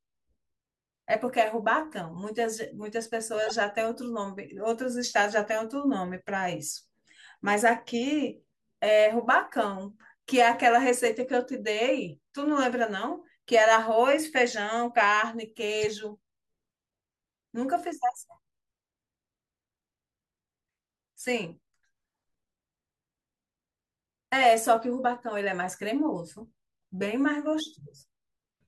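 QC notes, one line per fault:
3.46–3.51 s, corrupt frame decoded: a glitch, peaking around -20 dBFS, spanning what sounds like a few damaged frames that the decoder played as if valid. Misread gains and codes put energy at the wrong frequencies. A spectrogram shows a short block of stray bands unrelated to the harmonics; the waveform shows a sudden bulge.
9.49 s, corrupt frame decoded: a faint glitch, around -50 dBFS, from about one bad frame. It shows as a thin vertical sliver on a spectrogram.
15.81 s, corrupt frame decoded: a glitch, around -20 dBFS, over roughly a couple of frames. It shows as a narrow column of misplaced energy and a brief spike in the waveform.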